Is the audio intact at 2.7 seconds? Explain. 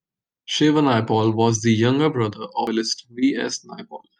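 No. At 2.67 s, just after "was the younger brother", there is damaged data in the compressed stream. Part of the encoded speech is corrupt, so the decoder misreads that frame, loses sync and hunts for the next valid frame header. The result is a brief chirp, squawk, click or short hole.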